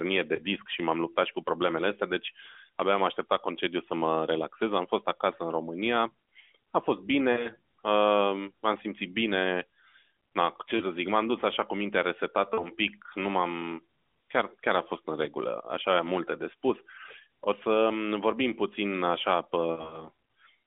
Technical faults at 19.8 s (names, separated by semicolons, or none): lost AMR speech frames